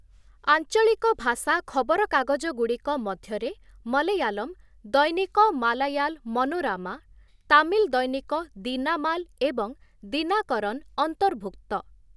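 No technical faults can be heard anywhere in the speech, so there is nothing to set out in time order.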